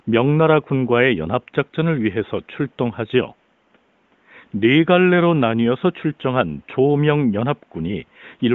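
Nothing stood out as a technical problem on listening to this speech recording.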